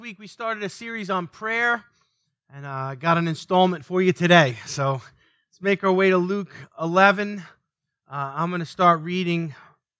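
It's a speech recording, and from 0.18 to 1.89 s there's automatic gain rising: the AGC decided the input was too quiet and pushed the level up by about 7 dB, so the voice and background swell together. The top end stops around 8 kHz, which fits the call's microphone processing.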